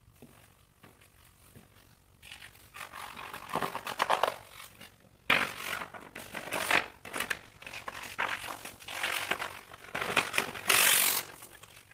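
Overlap-add ripple runs through the whole clip: the sound was split into windowed frames and rejoined with overlaps that don't sum to a steady gain, so the level swings by about 11 dB at around 50 times a second, giving a rough, robotic flutter. A call bitrate drop follows from 7.31 to 10.43 s, where the encoder, starved of bandwidth, codes more coarsely and trims high frequencies. The audio turns rough and muffled, which fits a fall from 32 to 14 kbps, worst for about 1.05 s before recovering.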